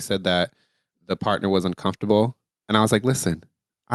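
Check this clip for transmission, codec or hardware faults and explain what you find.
One fault stands out, an automatic gain rising, heard through a call path whose top end stops near 12 kHz, consistent with an Opus link. From 0.23 to 3.33 s, the gain control judged the input too quiet and raised its gain about 4 dB, so voice and background swell together.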